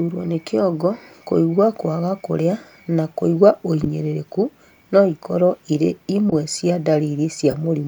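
Damaged compressed frames were decoded as if valid, a corrupt frame decoded fault in this speech clip, at 3.83 s after "kwaga kũrĩa na kũigua", 6.30 s after "no ikorũo irĩ", and 7.51 s, each spanning a couple of frames and heard as chirp-like bursts with error peaks of about -5, -10 and -10 dBFS.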